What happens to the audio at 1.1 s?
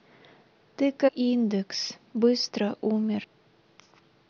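Damaged data in the compressed stream from 1.07 to 1.09 s throws the decoder off sync while it hunts for the next frame, briefly breaking the speech with a chirp, squawk, click or short hole.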